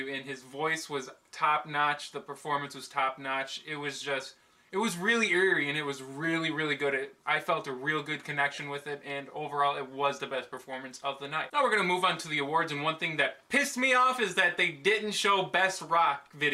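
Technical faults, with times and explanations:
8.55–8.58 s, lost LE Audio frames: for about 30 ms, consistent with three 10 ms LC3 frames going missing, the decoder refills the gap with the last spectrum under scrambled signs. Tonal content smears into noise rather than dropping to silence or repeating cleanly.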